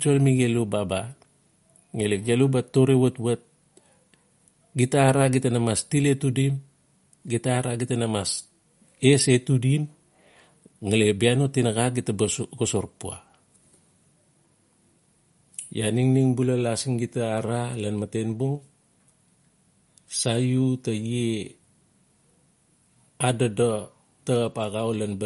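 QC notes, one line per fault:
throughout MP3 compression: The speech has nothing above 11.2 kHz and plainly audible coding damage. This likely comes from MP3 encoding at a low bitrate, around 48 kbps. Short of bits, the encoder cuts the treble at a fixed frequency and drops weak frequency detail.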